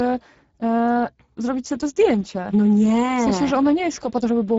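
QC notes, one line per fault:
Throughout, Speex codec: the speech comes across hoarse and grainy, and the damage is plainly audible on every phrase. Speex models the voice with a CELP predictor and spends very few bits on the excitation signal, so the harmonic detail gets replaced by coarse, noisy pulses, which fits a setting near 10 kbps. Nothing is present above 7.7 kHz, and the upper band below that sounds like a shaped noise fill rather than real detail.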